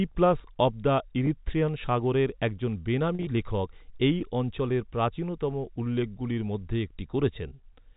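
At 1.26 s, between "অফ দ্য" and "সাগরের একজন", a single packet of about 10 ms went missing in transmission, and the receiver concealed it by packet loss with pitch repetition: it replayed the last pitch period to fill the hole, leaving a brief, slightly held buzz in the speech. From 3.15 to 3.27 s, after "সাগরের একজন" and before "লেখক এই অঞ্চলের প্রাচীনতম", about 80 ms of audio was lost across 120 ms, with the longest unbroken gap near 40 ms. That 40 ms stretch is too short to fade fully to silence, so the repeated periods produce a stuttering, buzzy smear, heard through the narrowband G.711 telephone coding.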